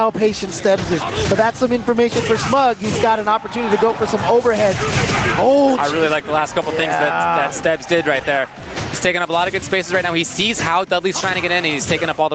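Throughout the clip the level swings by around 15 dB, so the audio feels squashed and breathing. This is gain pumping, likely from input gain set far too high with a fast limiter clamping each peak. The sound carries nothing above 8 kHz, consistent with a call path at that bandwidth.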